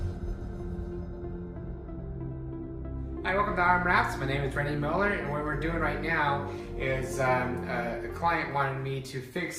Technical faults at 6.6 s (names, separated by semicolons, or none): none